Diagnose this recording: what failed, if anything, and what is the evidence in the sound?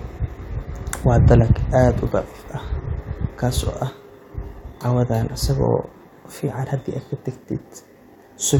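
Nothing audible in the speech points to a failure at any stage of the chain, from capture through to playback.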